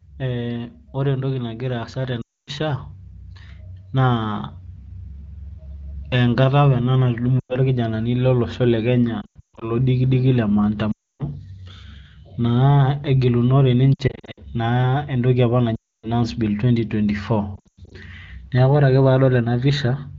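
Lost AMR speech frames break up the wideband speech at 2.21–2.50, 7.39–7.56, 9.22–9.68, 10.92–11.23, 13.94–14.39, 15.76–16.08 and 17.56–17.92 s. The decoder stretches the last good pitch and timbre with fading gain, so each break sounds smeared or warbled and then fades out. At 9.22, 13.94 and 17.56 s the damage comes in scattered stutters. That quick fade distinguishes it from a hard packet-loss dropout, which cuts straight to silence.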